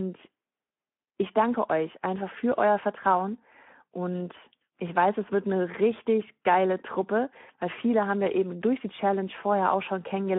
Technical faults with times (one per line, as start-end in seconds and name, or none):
0.00-10.38 Speex codec